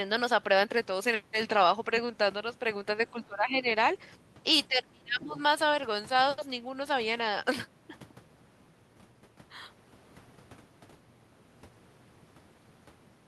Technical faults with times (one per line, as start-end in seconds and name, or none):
3.11-3.71 speech suppressed in double talk
4.68-5.39 speech suppressed in double talk